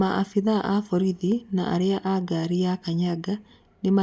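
No technical faults are audible.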